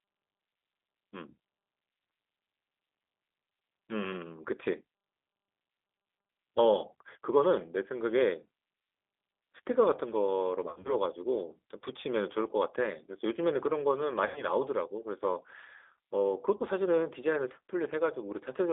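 Throughout, the speech carries G.729 codec damage: rough, slightly synthetic timbre that fits 8 kbit/s coding, and a spectrogram empty below 300 Hz and above 3.6 kHz.

At 10.69–10.96 s, 14.26–14.43 s and 16.57–16.63 s, VoIP packet loss concealed by the speech codec produces stretched, fading stretches of buzz or coloured noise. The decoder repeated the last pitch and filter with falling gain. These show as flattened harmonics and a decaying waveform envelope, the first spread over 160 ms with gaps up to 30 ms.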